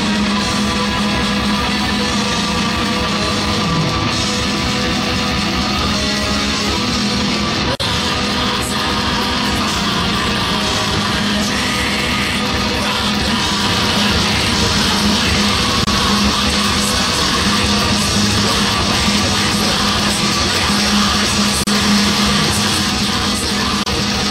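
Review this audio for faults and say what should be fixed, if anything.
Gaps at joins of encoded pieces occur at 7.75 s (47 ms), 15.84 s (29 ms), 21.64 s (34 ms) and 23.83 s (33 ms). Continuous sound drops into brief silences with smeared edges, left by encoder start delay and last-frame padding kept when separately encoded pieces were joined. To prevent this, trim each piece's encoder delay and padding before joining, or encode the whole programme in a single pass.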